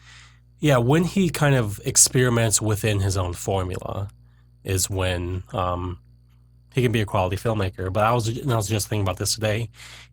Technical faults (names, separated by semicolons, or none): adaptive stream at a lower bitrate